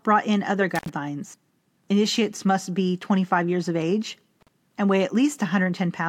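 Speech with an intermittent contact at 0.75–0.90 s after "brought in other" (about 71 ms open) and 4.41–4.48 s between "years of age" and "and weigh" (about 43 ms): the signal drops to hiss, shown as near-empty gaps flanked by vertical broadband crackle clicks.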